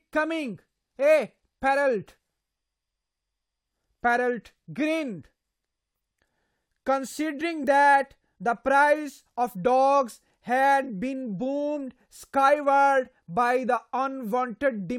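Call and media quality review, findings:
Dull, band-limited speech with synthetic-sounding top end and heavier codec artefacts, 0.0–6.0 s, then an abrupt, gapless jump in clarity. Adaptive stream starting at a low bitrate. The sound points to roughly HE-AAC 32 kbit/s upgrading to AAC-LC 96 kbit/s, with nothing above 16.3 kHz afterwards.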